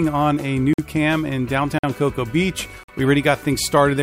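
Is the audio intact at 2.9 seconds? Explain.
No. A gap between chunks opens from 2.83 to 2.88 s: 50 ms of hard-edged silence at a join between 1.0 s chunks. Unlike a dropout, nothing is deleted; the sound resumes exactly where it stopped, just pushed later.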